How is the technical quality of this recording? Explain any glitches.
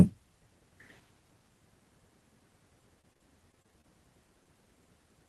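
The recording has two network glitches, both in the second half of this 5-second speech clip.

Repeated packet loss (robotic sound), 3.01 to 3.85 s: packets dropped again and again, leaving six short holes, the longest 27 ms, about 120 ms in total. Each hole was patched by extending the preceding sound, so about 14% of the stretch is synthetic fill, giving a choppy, robotic texture with fragments missing.

Short stall from a late packet, 4.43 to 4.47 s: one packet arrived about 22 ms late and the jitter buffer ran dry. The receiver held the last sound for 22 ms until it came, then resumed where it left off, so nothing is lost but one sound drags briefly with a faint buzz or dip.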